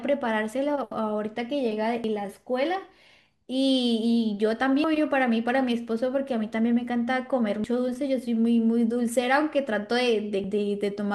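Speech with abrupt skips at 2.04, 4.84, 7.64 and 10.44 s, each removing about a fifth of a second and splicing the ends directly, likely audio missing between 3-second chunks, not silent dropouts.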